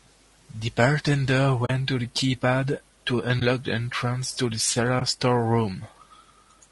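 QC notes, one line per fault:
Throughout: low-delay AAC compression. The speech sounds rough and grainy, with noise filling the gaps between harmonics and a thin, synthetic-sounding top band. This plainly audible damage is likely from AAC-ELD coding at a low bitrate near 32 kbps.
1.65–1.70 s, 3.39–3.42 s, 4.99–5.02 s: AAC frame loss with muting. The sound drops into brief soft-edged holes, about 40 ms at 1.65 s and 20 ms at the others. The decoder zeroed the missing frames, and overlapping windows fade the sound out and back in.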